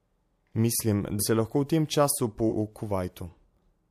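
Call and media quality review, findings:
Compressed frames skipped, 1.19–1.23 s, right before "se lahko v tem". The speech jumps ahead by about four frames, roughly 200 ms gone. Likely the decoder is dropping missing or damaged frames.

Same again at 2.49–2.53 s, just after "lahko v tem času". It's a bigger jump, around seven frames, about 300 ms lost. The step size fits a 46.4 ms codec frame.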